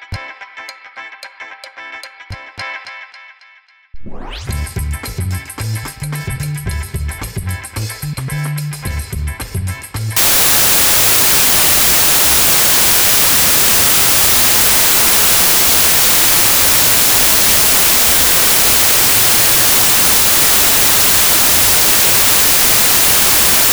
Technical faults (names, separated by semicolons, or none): wrong sample width